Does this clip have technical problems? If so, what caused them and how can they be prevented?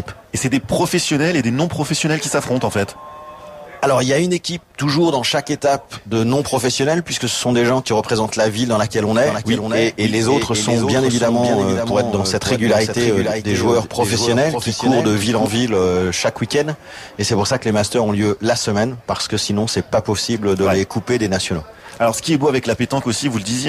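Yes. From 9.26 to 15.46 s there is a doubled audio track, likely caused by the same signal reaching the mix twice, once directly and once through a slower path or an out-of-step edit. The result is a second full-band copy trailing the original by roughly half a second, about 5 dB quieter, with no decay or room colour, cutting in and out abruptly at both ends. To prevent it, route each source through a single path and check edits for overlapping duplicate regions.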